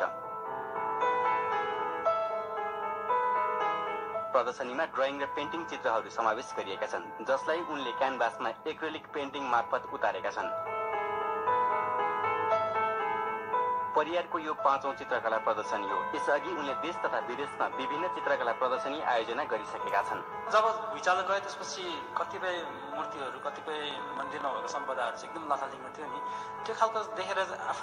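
From 23.68 s to 24.76 s a train of clicks sits on top of the audio: roughly fifteen similar sharp pulses at about 13 per second, spaced unevenly, with peaks around 5 dB above the surrounding signal. They are heard as a rapid, irregular ticking that cuts through the program material rather than blending with it. The likely cause is an external disturbance, such as electrical interference from nearby equipment or a faulty connection or power supply, injecting repeated pulses into the path.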